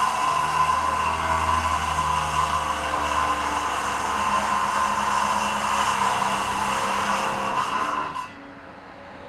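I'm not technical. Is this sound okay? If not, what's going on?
Yes, it's okay.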